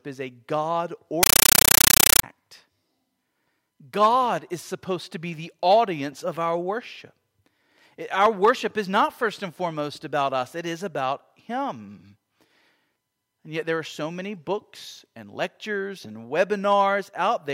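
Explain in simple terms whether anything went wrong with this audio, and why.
From 1.23 to 2.23 seconds, the speech is replaced by very loud, harsh static that chatters rapidly. This is a compressed stream played as audio. A packed Dolby Digital signal was sent to the player, which treated it as ordinary sound instead of unpacking it first. Each packet comes out as a short blast of noise, about 9 milliseconds long, followed by silence. This repeats about 31 times a second, which makes the rattling sound.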